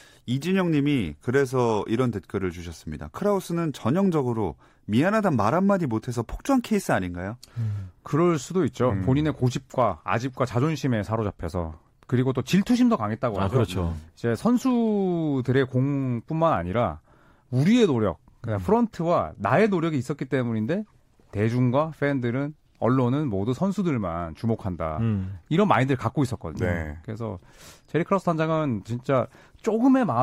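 From 0.10 s to 30.22 s, clock slip clicks form a soft, evenly spaced rattle roughly every 20 ms, likely from unsynchronised device clocks; unlike random crackle, they vanish in pauses.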